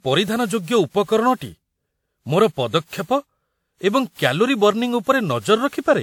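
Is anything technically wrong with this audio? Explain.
Yes. Generation loss runs through the whole speech clip. The swirly, hollow smear and blurred consonant attacks point to a WMA-like codec near 96 kbit/s, likely re-encoded around seven times. A spectrogram shows nothing above 19.9 kHz, with smeared transients.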